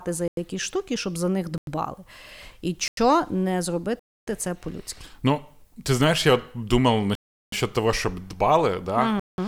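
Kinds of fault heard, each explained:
Block of digital silence: the audio drops straight to silence and snaps back with no fade. There are gaps at 0.28 s (just before "якісь штуки щоб за"), 1.58, 2.88, 3.99, 7.15 (between "ты знаешь я думав" and "того щоб дбали") and 9.20 s. They run about 93 ms three times, then 279, 372 and 186 ms, all multiples that fit a 4096-sample buffer not being filled in time.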